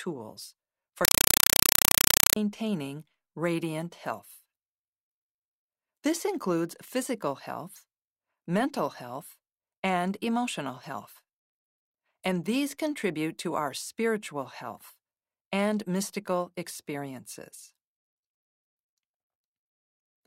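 From 1.05 to 2.36 s, a compressed stream played as audio: the pattern points to an undecoded Dolby Digital bitstream read as ordinary samples. Each frame becomes a 4 ms noise burst then zero padding, 31.25 times a second, so very loud chattering static replaces the speech.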